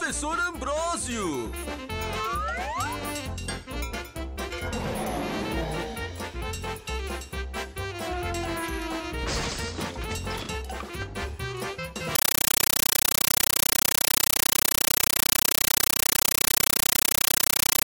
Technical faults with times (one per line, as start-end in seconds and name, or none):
12.15-17.87 compressed stream played as audio